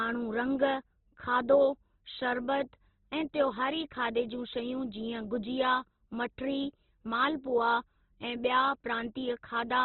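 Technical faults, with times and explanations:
throughout: Opus compression. The speech sounds grainy, rough and boxed in, with nothing above 4.1 kHz. This is likely heavy Opus coding in its music mode at a very low rate, consistent with 12 kbps, where starved bands get noise-filled and bandwidth shrinks to narrowband.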